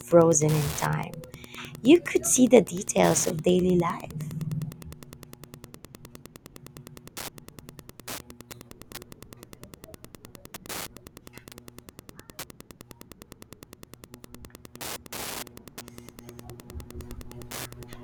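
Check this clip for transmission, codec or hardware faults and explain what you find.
There is one hardware fault, Wi-Fi interference, present throughout the speech. A nearby Wi-Fi radio's beacon, repeating every 102.4 ms, is rectified by the audio circuit, giving a steady tick just under ten times a second, roughly 20 dB below the speech. Its exact, unvarying rate distinguishes it from random crackle or mobile-phone buzz.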